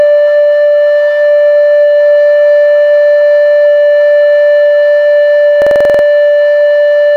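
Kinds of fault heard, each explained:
Low bit depth without dither: A grainy, gritty roughness rides on the music throughout, clinging to the sound and changing with it. It is most exposed in quiet passages and decays, where fine detail breaks up into coarse steps. The likely cause is truncation to about 9 bits with no dither, so the rounding error tracks the signal, at around 55 dB below the music.
System hang loop: From 5.62 to 6.04 s the music gives way to a rapid mechanical stutter as one fragment repeats exactly, nine times, at about 21.5 repeats per second. Each repeat lasts 46.4 ms, which fits a 2048-sample buffer. The sound hardware kept replaying the same ring-buffer contents while the software feeding it stalled. When playback resumes, little or no music appears to be missing.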